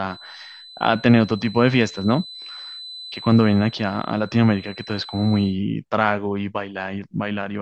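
From the start to 5.59 s, a feedback whistle at 4 kHz sits about 20 dB below the speech, likely from a speaker-microphone loop held just short of runaway.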